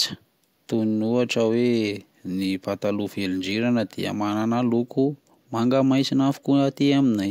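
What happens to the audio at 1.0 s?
Nothing goes wrong at 1.0 s; the speech runs on intact through that moment with no audible fault.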